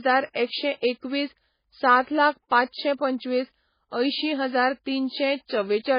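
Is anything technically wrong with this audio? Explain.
Yes. The speech has two faults: heavy MP3 compression throughout and a pre-echo near the start.

For the whole clip the audio sounds dull and watery, with a swirling, unstable texture and smeared consonant attacks. Nothing is present above 5 kHz, so s sounds lose their crispness. The likely cause is heavy MP3 compression at a very low bitrate, one that fits roughly 16 kbps. Short of bits, the encoder cuts the treble at a fixed point and lets weak frequency components drop in and out from frame to frame.

From 0.31 to 0.35 s a short hiss runs ahead of an attack, about 44 ms of noise before the onset, and the attack itself sounds softened. This is pre-echo. The codec spreads its quantisation noise across a whole block, so when a sharp onset falls late in a block, noise sized for the loud part also fills the quiet moment before it.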